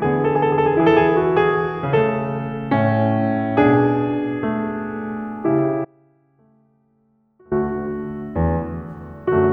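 At 5.85 s the music drops out abruptly and stays gone until 7.51 s, about 1.67 s in all, an audio dropout to a faint residue. Through the gap only a faint sound remains, about 30 dB below the normal level of the music. The likely cause is the wanted signal being lost while the path after the break stayed live. The sudden cut and equally sudden return, with sound still leaking through, set it apart from a fade or a dead-silent gap.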